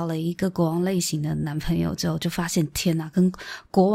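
No faults can be heard anywhere in this recording.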